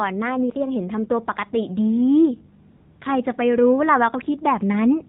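The whole clip passes through the AMR narrowband mobile codec. Nothing above 4 kHz survives, so the speech sounds boxed in. The damage is plainly audible. Voiced sounds turn buzzy and synthetic, which fits a low 7.4 kbps mode.

From 2.70 to 3.00 s, AMR comfort noise takes over. For those 300 ms no speech frames arrive. The receiver fills the gap with generated noise. The real background drops away, and a smooth, steady hiss switches in, then out.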